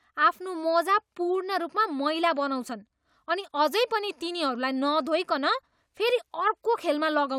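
Speech recording, no technical faults heard anywhere in the clip.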